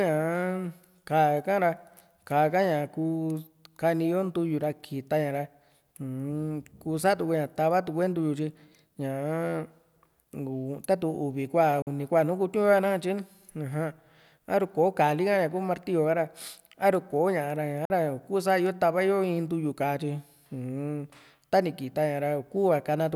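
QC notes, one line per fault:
11.82–11.87 s and 17.85–17.90 s, Bluetooth dropout: the speech cuts to silence for about 46 ms each time, then continues as if it had kept playing. The likely cause is audio packets arriving too late at the headphones and being discarded, with each gap matching about two lost packets.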